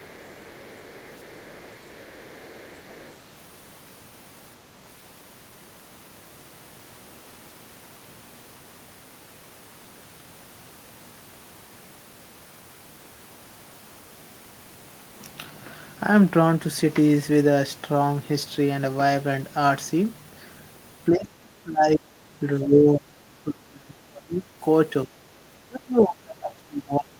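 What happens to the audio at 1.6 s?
At 1.6 s you're inside a stretch of the other side's voice leaking through, running from the start to about 3.16 s. A second voice sits very faintly under the talker, well below them. Likely the echo canceller didn't fully remove loudspeaker playback from the mic.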